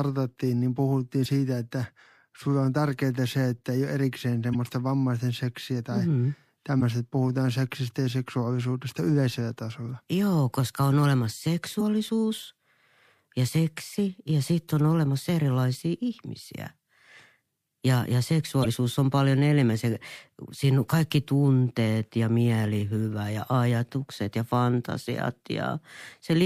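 Damaged data in a compressed stream hits the speech five times, at 1.22–1.26, 4.51–4.55, 6.78–6.82, 11.77–11.82 and 18.62–18.66 s. Corrupted bytes make the decoder misread frames and hunt for the next header, leaving a short chirp or blip of about 40 ms each.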